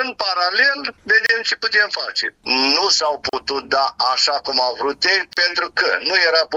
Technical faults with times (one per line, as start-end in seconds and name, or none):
1.26-1.29 gap at a join of encoded pieces
3.29-3.33 gap at a join of encoded pieces
5.33-5.37 gap at a join of encoded pieces